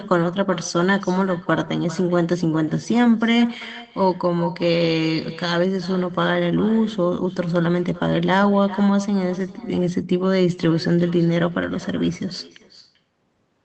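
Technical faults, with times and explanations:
Throughout, echo with no canceller: every phrase gets a faint ghost of itself coming back roughly 0.4 seconds later, about 19 dB down, and it sounds thinner than the direct speech. That's what you get when the far end plays the call through a loudspeaker, their mic picks it up, and nothing cancels it, so the talker hears themselves after the network round trip, through a call codec band-limited to about 8 kHz.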